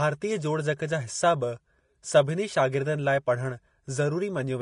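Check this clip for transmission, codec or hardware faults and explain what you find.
One codec fault runs through the whole speech clip: Vorbis compression, with plainly audible damage from start to finish. The band stops dead at about 10.5 kHz, and the treble below that edge sounds hissy and grainy, with softened consonant onsets. This is likely Vorbis working at a low rate, roughly 33 kbps. Its coarse quantisation turns fine high-frequency detail into noise of similar energy. On a spectrogram, there is a flat ceiling at 10.5 kHz and speckled, blotchy energy beneath it.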